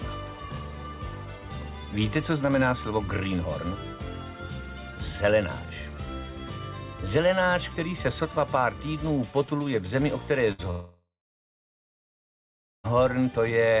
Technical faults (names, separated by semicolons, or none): burst of packet loss; long network dropout